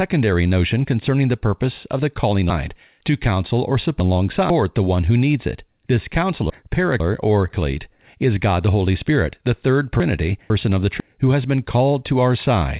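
Chunks out of order occur three times, where half-second blocks of the speech arrived late and play after the material that should follow them. Between "purpose of the calling" and "the one who needs", 2.5 to 4.5 s, a block slips three places. At 6.5 to 7.5 s, and again from "the third" to "who has been" at 10.0 to 11.0 s, a block is one place late. Each sounds jumbled, and the waveform and spectrogram show abrupt discontinuities at the 500 ms boundaries, all within a spectrum that stops at 4 kHz.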